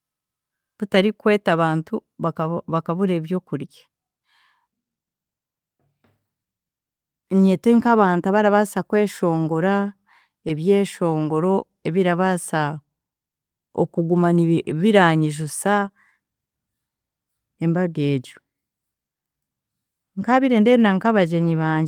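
Lost packets rebuilt from error correction at 0.93–0.95, 7.83–7.89 (40 ms), 9.51–9.53 and 14.69–14.71 s leave no gaps but briefly roughen and add noise. After "nibi biranyijusa", short concealed packet loss at 15.79–15.83 s briefly smears the sound as the decoder extends what came before, with a rebuilt frame within it at 15.81–15.83 s. Another rebuilt frame follows at 20.31–20.33 s.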